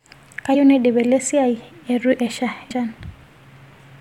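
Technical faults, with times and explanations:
0.54 to 0.56 s and 2.70 s, compressed frames skipped: the speech jumps ahead twice, losing about a tenth of a second the first time and around 150 ms the second, as whole chunks of the encoded stream go missing or get rejected by the decoder. The jumps fit a frame length of about 23 ms, about four frames the first time and seven the second.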